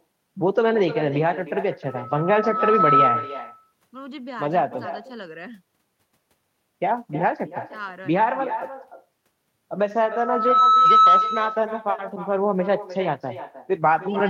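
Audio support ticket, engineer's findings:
Echo with no canceller, whole clip. Every phrase shadowed by a thin copy about 12 dB down, trailing by about 300 ms. Far-end loudspeaker into its mic, nothing cancelling. Spectrogram: faint duplicate of each speech band, shifted right.

Loudspeaker feedback squeal, 1.88–3.41 s and 10.06–11.46 s. Steady 1.3 kHz tone swelling to roughly 10 dB over the speech. Build-up takes about a second in the first event and about half a second in the second. Mic-to-speaker loop gain above unity at that frequency. Spectrogram: a bright horizontal line at 1.3 kHz, fading in then cut off. Waveform: an envelope that ramps up to a flat, dense block.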